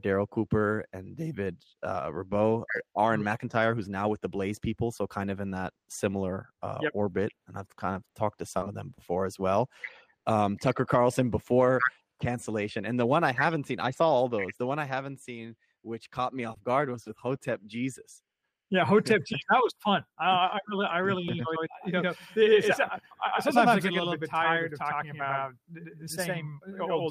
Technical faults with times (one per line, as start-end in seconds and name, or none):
21.28-27.10 doubled audio track